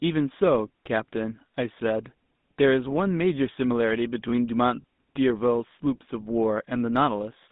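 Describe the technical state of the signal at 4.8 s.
At 4.8 s the speech is carried through the GSM full-rate codec, and there is a lost GSM frame at 4.82 to 4.84 s. The codec rebuilds the voice from a vocal-tract filter excited by a sparse, regularly spaced pulse train, which fits the 13 kbps full-rate mode. Damage is plainly audible as a buzzy, gravelly texture, and the line band runs only from about 150 Hz to 3.7 kHz.

The 20 ms gap fits a single dropped codec frame. The decoder covers it by reusing the parameters of the previous good frame rather than going silent. Because the loss is so short, the sound does not fade away. Instead it appears as a brief rough, metallic ring in place of the missing audio.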